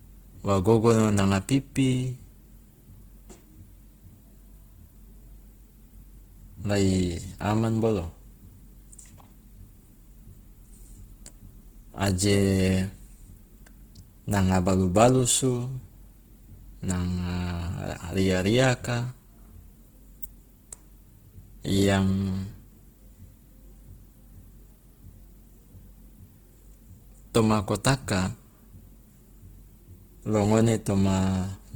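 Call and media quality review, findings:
Opus compression, throughout the clip. Speech plainly grainy and rough, noisy, with few spectral holes and little swirling. Likely Opus CELT music mode short of bits, rebuilding bands by folding or noise fill. Points to a rate around 16 kbps, full bandwidth kept.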